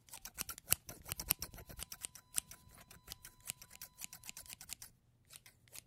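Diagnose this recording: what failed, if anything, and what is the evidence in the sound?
A steady, fixed-pitch whine at 1 kHz sits under the sound from 1.17 to 4.56 s, roughly 30 dB below it. This is USB whine in the analogue wiring: the bus's 1 ms frame activity pulls current, and that ripple leaks into the audio through shared power or ground.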